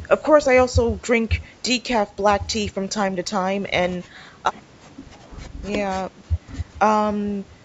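No technical faults can be heard anywhere in the speech. It has passed through call microphone processing, which trims away the lowest bass and leaves nothing above 8 kHz, as that path normally does.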